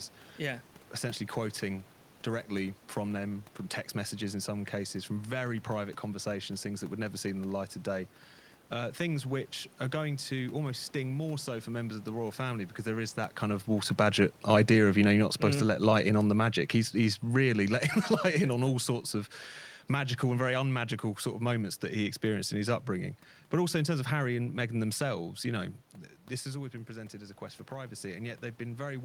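From 14.37 to 17.82 s, automatic gain falling: after the talker moves around 13 s, the gain control cuts its level by about 5 dB, so speech and room noise sink together. From 26.52 s to the end, automatic gain rising: the talker moves away around 26 s, the input drops by about 11 dB, and the gain climbs so that speech and background swell together.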